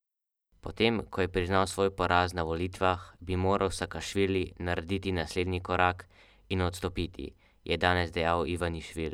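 Nothing goes wrong anywhere in this stretch of speech, so there's no fault to point to at any moment.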